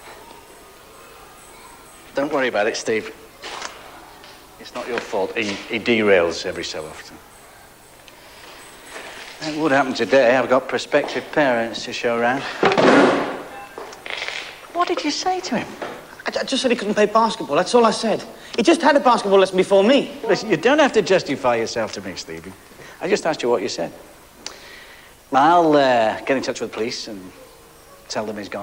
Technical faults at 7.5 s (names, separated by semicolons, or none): none